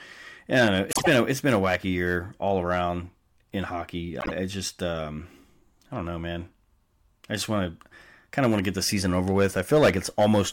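Speech, with frames out of order twice: adjacent blocks of coded audio were decoded in swapped sequence, so each stretch plays with its halves exchanged. At 0.91 to 1.08 s the swapped blocks are about 52 ms each, and at 4.20 to 4.32 s about 26 ms each. Both stretches come out as a brief garbled flutter, with no time lost.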